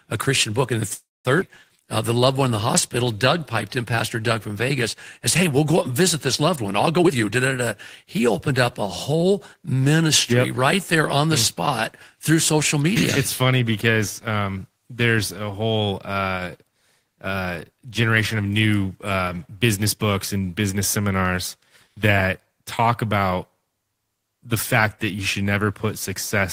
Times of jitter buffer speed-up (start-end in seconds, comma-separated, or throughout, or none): 6.98-9.17, 15.80-16.32